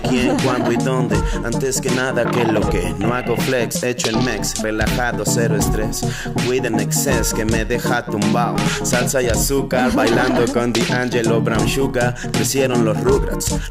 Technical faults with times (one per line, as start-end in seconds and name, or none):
4.64 dropped buffer (overrun)
7.70 dropped buffer (overrun)